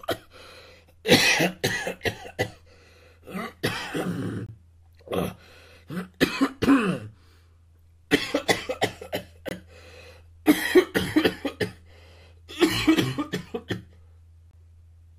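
Gaps between chunks interrupt the audio at 4.46, 9.49 and 14.51 s: 23 ms silent holes every 5 s, shown as hard-edged blank columns spanning all frequencies on a spectrogram.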